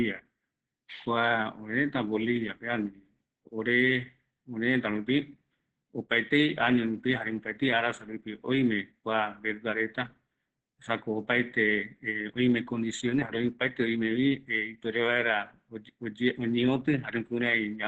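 Speech that sounds muffled, hoarse and faintly robotic throughout, with nothing above 8.8 kHz: heavy Opus voice compression, its coarse excitation coding fitting roughly 10 kbps.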